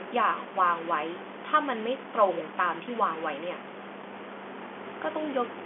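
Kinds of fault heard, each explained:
Stuck bit: A distortion rides on the speech from start to finish. It also fills the pauses with noise. The likely cause is one data bit held fixed at 0 or 1. Roughly half the samples then land off by that bit's weight, following the waveform's shape. The narrow telephone band, with nothing above 3.7 kHz, stays intact.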